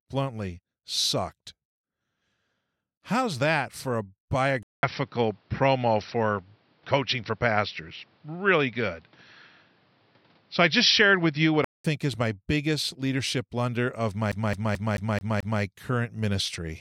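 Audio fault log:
4.63–11.84 s, input switched to a poorer device: after "that for a", a 200 ms gap, then dull speech with nothing above 5.8 kHz, a level shift of roughly 5 dB and a faint new noise floor, likely a change of microphone. On a spectrogram the top band cuts off flat until "is my biggest leadership".
14.32–15.62 s, CD stuck on one turn: after "biggest leadership blunder of", a 0.22 s piece of speech repeats six times with brief mutes, a rapid even stutter. The waveform shows identical blocks before "current ministry".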